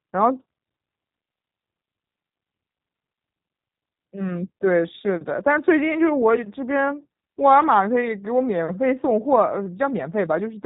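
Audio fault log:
Throughout, G.729 codec: nothing above 4 kHz survives, and the speech sounds plainly rough and synthetic, rebuilt from a vocal tract filter and sparse pulses.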